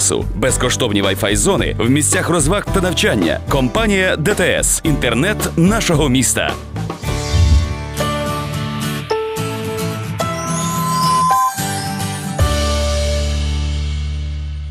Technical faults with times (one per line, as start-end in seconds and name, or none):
10.20-11.53 loudspeaker feedback squeal